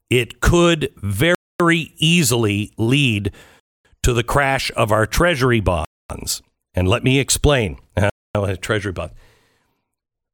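The speech drops into hard-edged silence four times, at 1.35, 3.60, 5.85 and 8.10 s, each hole lasting 250 ms before the sound resumes exactly where it stopped. The regular 2.25 s spacing is the giveaway for a gap between chunks: the audio was delivered in 2.0 s chunks, and each join is followed by a quarter-second of silence. Nothing is lost, but the flow is cut at every boundary.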